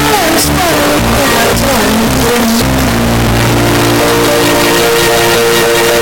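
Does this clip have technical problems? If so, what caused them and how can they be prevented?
Yes. Throughout, the music is harsh, flat-out loud distortion, likely from signed and unsigned samples mixed up. Each zero crossing jumps full range, so the waveform is a solid block and the spectrogram is broadband. Prevent it by declaring the sample format, here fitting 16-bit, and making writer and reader use the same one.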